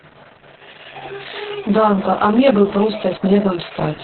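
Speech, with two faults running through the whole clip. The first is channel delay, which causes comb filtering. One channel arrives around 20 ms late, and the two are summed to mono. Content common to both cancels at evenly spaced frequencies, starting near 30 Hz. The result sounds rough and slightly doubled. The second is Opus voice compression in its SILK mode, narrowband. Nothing remains above 4.2 kHz, so the speech is muffled. The coding damage is heavy, with a hoarse, slightly robotic quality. That points to a very low bitrate, around 6 kbps.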